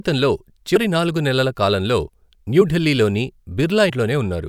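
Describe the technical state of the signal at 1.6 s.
At 1.6 s the speech signal is intact, with no dropout, clipping, glitch or other fault audible at that point.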